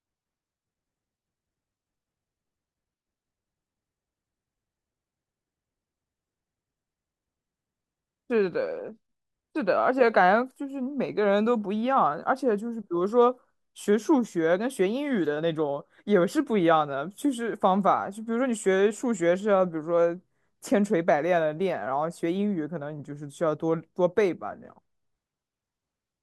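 No technical faults are audible.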